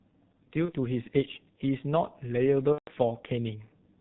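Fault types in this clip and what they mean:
G.723.1 codec: heavy low-bitrate coding near 6.3 kbit/s strips everything above 4 kHz, leaving muffled, hoarse speech; spectrograms show an empty band above 4 kHz throughout.
VoIP packet loss concealed by the speech codec: lost packets at 0.65 s (one 30 ms frame) and 2.72 to 2.90 s (150 ms) become a fading buzzy tone or coloured noise, visible as decaying waveform amplitude.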